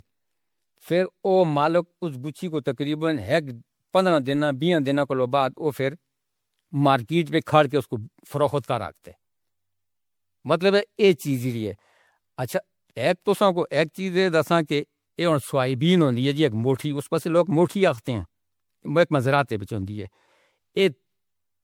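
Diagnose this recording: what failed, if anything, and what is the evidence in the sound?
Generation loss, throughout, at the codec stage. The speech is swirly, smeared and hollow, with blurred attacks, beyond what a single MP3 pass near 96 kbit/s would give. Likely cause: about four MP3 re-encodes, each requantising on a shifted frame grid so noise and spectral holes accumulate.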